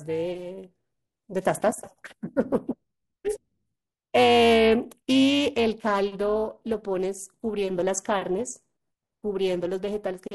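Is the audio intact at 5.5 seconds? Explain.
No. Periodic clock jitter runs throughout, so it is present at 5.5 s: the converter clock wobbles at around 400 Hz, putting rough, metallic sidebands on the speech that vanish in pauses, unlike steady hum.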